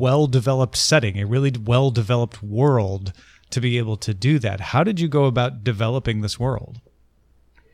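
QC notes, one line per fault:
No technical faults turn up anywhere in this signal.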